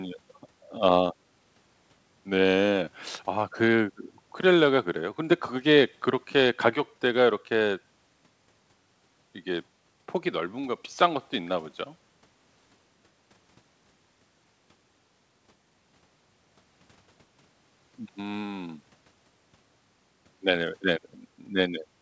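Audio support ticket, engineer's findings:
No faults found; call path behaving as expected.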